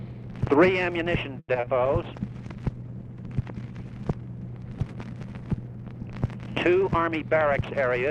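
A held sustain at 1.39 to 1.49 s is a short stall from a late packet. A packet missed its playout time and the jitter buffer ran dry, so the receiver stretched the last sound for about 90 ms until the packet came in and then resumed from the same point. Nothing is lost, but the hold adds roughly 90 ms of delay. Right after, between 1.53 and 1.66 s, come two small smears, the second at 1.60 to 1.64 s. These are short concealed packet losses, about 10 ms and then 30 ms of audio that never reached the decoder. The receiver bridged each gap by extending the preceding sound and cross-fading back into the real signal. From 1.86 s to 6.68 s the audio turns rough and watery and loses its top end. This is a call bitrate drop: the bandwidth estimate fell and the encoder went from 96 to 19 kbps, holding the lowest rate for about 2.3 s. At that rate coding is coarse and the audio bandwidth shrinks from 20 kHz to 12 kHz, which is where the dull, smeared quality comes from. 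Finally, from 6.75 to 7.82 s the sound runs hurried at unchanged pitch, about 108 percent speed. That is a jitter buffer speed-up: with more audio queued than its target, the receiver repeatedly cut out pitch-period-length slices, removing around a tenth of a second in total to bring the delay back down.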